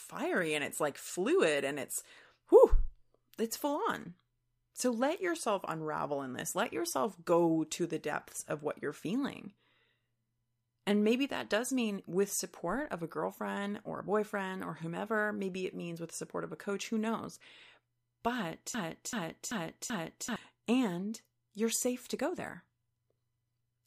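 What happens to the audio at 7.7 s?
Nothing out of the ordinary happens at 7.7 s; the speech carries on intact through that moment with no dropout, click or other fault to be heard.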